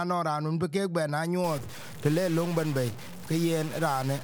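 From 1.44 s to the end, harsh buzzy distortion fills the audio and its quiet gaps, likely a stuck bit adding steps of around -35 dBFS.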